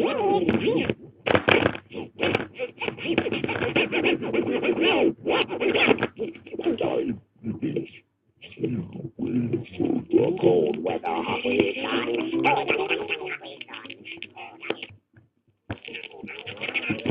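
Compressed frames skipped at 2.81, 4.00 and 10.10 s: about 20 ms of audio jumps ahead each time, missing or rejected frames being left out.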